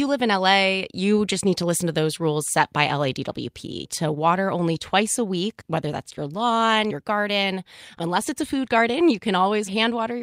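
Nothing technically wrong turns up anywhere in this short bit of speech; it just carries on as it should the whole way.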